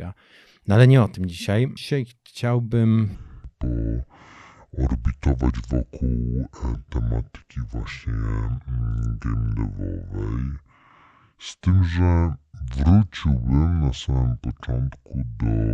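A likely clock mismatch plays everything from 3.15 s onward at 0.619 times speed, a section at the wrong speed, so the speech drops roughly seven semitones and drags, deep and slow.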